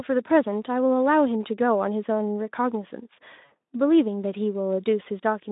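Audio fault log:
3.45 to 3.53 s: VoIP packet loss concealed by the speech codec. About 60 ms of speech went missing, which fits three lost frames. The decoder stretched its last pitch and filter into a fading buzzy tone or coloured noise. Speech stays weak briefly after packets resume, through the narrowband Speex line.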